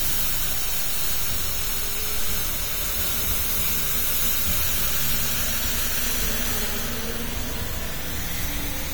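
Listening to this recording of everyday sounds, nothing stood out as a technical problem.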